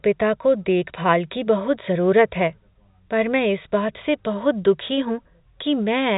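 Nothing stood out on listening to this speech clip.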